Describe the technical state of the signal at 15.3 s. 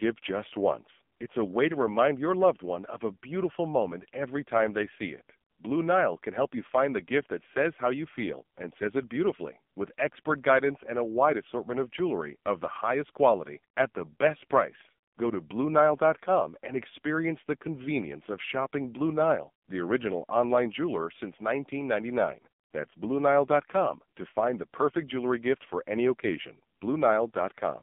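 At 15.3 s the AMR narrowband mobile codec is active, as throughout: band-limited to 200 Hz–3.5 kHz, buzzy and synthetic, which fits a low 5.9 kbps mode.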